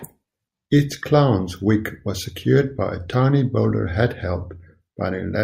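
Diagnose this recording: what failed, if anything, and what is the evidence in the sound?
Nothing failed; no fault can be heard anywhere.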